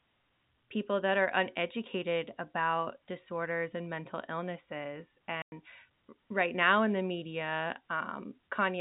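Packet loss filled with silence at 5.42 to 5.52 s: the speech cuts to dead silence for 100 ms, which fits five missing 20 ms packets. The receiver inserted nothing in their place, so the gap has hard edges within the 4 kHz-limited G.711 telephone band.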